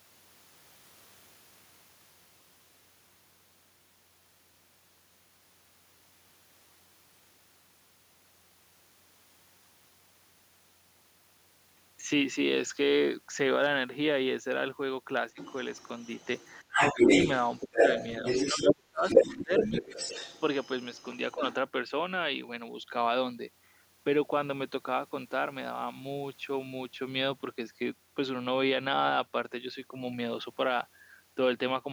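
From 15.36 to 18.74 s, a second voice runs underneath the speech, somewhat louder than the talker. This is the other side's voice leaking through: the far end, likely played on the talker's loudspeaker and picked up by the microphone, was not fully removed by the echo canceller. Unlike a dropout, this adds sound. A competing voice sits on top of the main one.

While that leak is present, the talker's own speech is pushed down. At 16.63 to 17.07 s the dip is deep, around 20 dB. At 17.62 s there is only a slight, brief sag. From 18.5 to 19.86 s about a second of speech nearly vanishes, falling by as much as 30 dB. This is speech suppressed in double talk, likely from the canceller turning everything down when both sides spoke at once. It removes the talker rather than adding anything.

A second stretch of leakage follows from 19.05 to 21.54 s, quieter this time and sitting below the speech. 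Inside it, at 21.35 s, the talker dips once more, briefly and by about 10 dB.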